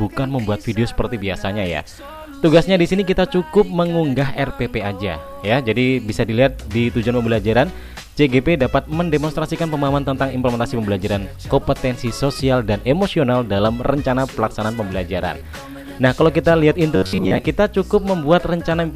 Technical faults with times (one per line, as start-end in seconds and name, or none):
16.96-17.41 robotic sound from repeated short buffers